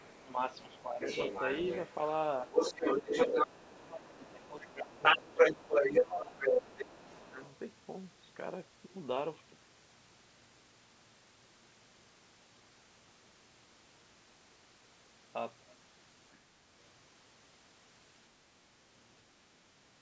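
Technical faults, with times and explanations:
0.00–1.95 s, other side's voice leaking through: a second voice sits a little below the main speech, likely loudspeaker echo the canceller failed to remove from the microphone.
0.22–1.01 s, speech suppressed in double talk: while both voices overlap, the main speech dips by up to about 10 dB over roughly half a second in pieces, likely the canceller turning down everything it could not separate from the echo.
2.45–6.45 s, speech suppressed in double talk: during the overlap the main speech drops in pieces by as much as about 15 dB, totalling around two seconds, likely the echo canceller attenuating the talker along with the echo.
2.54–7.57 s, other side's voice leaking through: the second voice is now clearly louder than the main speech, by around 10 dB, likely residual loudspeaker echo the canceller failed to remove.
7.00–7.41 s, speech suppressed in double talk: a further short dip of up to about 15 dB, lasting under half a second, likely the same suppression reacting to the loud echo.
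16.32–16.38 s, other side's voice leaking through: a very faint scrap of the second voice, far below the speech, likely a brief echo residue.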